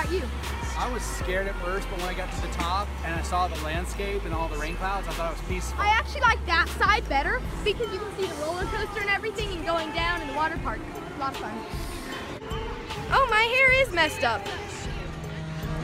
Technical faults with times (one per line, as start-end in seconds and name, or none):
none